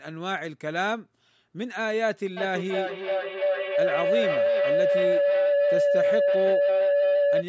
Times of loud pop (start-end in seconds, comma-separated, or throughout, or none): none